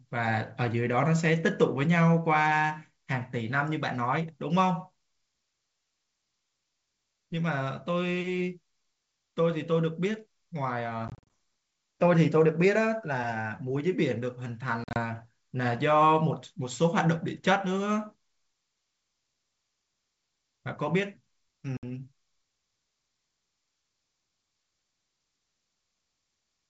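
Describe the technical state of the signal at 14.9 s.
Packet loss on an ADPCM call runs from 14.84 to 15.01 s: about 90 ms of sound drops to hard-edged silence, scattered over 120 ms with the longest gap near 40 ms. Each dropout leaves the decoder's adaptive predictor and step size out of step with the sender's, so the sound resumes misjudged before settling.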